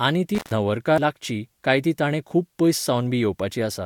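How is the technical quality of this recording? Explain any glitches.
The recording has two distinct glitches in its first second.

From 0.35 s to 0.51 s the sound crackles and then drops out for about 131 ms, leaving only faint hiss before it returns with another crackle. This is an intermittent contact. A loose cable or plug briefly lost connection, so the signal path opened. The scratchy edges come from the contact making and breaking, and the hiss is what the open line picks up while nothing reaches it.

At 0.98 s, just before "लागची काय ती ताणें", a small tick and a very short mute of a few milliseconds are followed by a sudden jump in the speech. This is a CD skip. A knock or a flaw on the disc made the laser leap to another turn of the spiral. The player muted for that instant and resumed from a different place, so the speech jumps abruptly rather than continuing smoothly.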